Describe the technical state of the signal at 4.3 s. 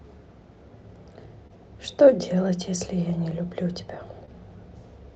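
At 4.3 s the speech carries a short concealed packet loss, spanning 4.25 to 4.29 s. About 20 ms of audio failed to reach the decoder in time. The receiver covered the gap by extending the preceding sound, then blended back into the real signal. It is heard as a brief smear or wobble, and a short consonant there can drop out. The surrounding audio carries Opus call coding, with content stopping near 8 kHz.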